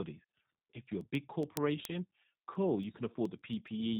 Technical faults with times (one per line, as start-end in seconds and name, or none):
0.00-3.99 G.729 codec
0.17-3.96 word clock ticks